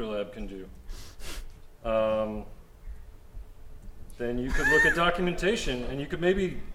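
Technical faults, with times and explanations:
Nothing technical gets in the way here; every part of the clip comes across just as it should.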